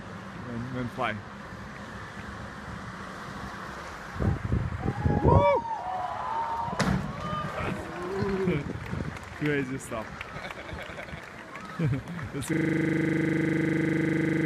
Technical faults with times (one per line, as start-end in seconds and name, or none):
7.62-7.82 DAB burbling
12.53-14.46 system hang loop